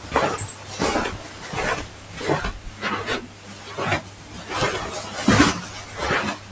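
Throughout the recording the level breathes and flutters, swinging by about 10 dB as steady parts and tails sink and sharp onsets pass through. A noise suppressor built for speech was left running on everyday sounds, treating sustained content and ambience as noise to strip away.

The clearest dips fall at 0.53–0.72 s, 1.18–1.48 s, 1.86–2.16 s, 3.27–3.67 s and 4.04–4.34 s, where the sound is cut by the noise suppressor. Each held or decaying stretch drops by up to about 5 dB for 200 to 400 ms, or its fade is clipped short. Above this, the call's microphone path passes nothing over 8 kHz.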